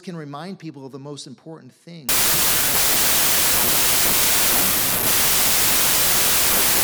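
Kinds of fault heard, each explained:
Wrong sample width: audio written as 32-bit integers is being read back as packed 24-bit integers, so most values are built from mismatched bytes and only some carry the true top bits. From 2.09 s, right after "of the most important", the speech turns into loud noise with the real signal buried underneath. It plays at 0.75 times normal speed, so it is stretched and lower in pitch, and it stays that way to the end.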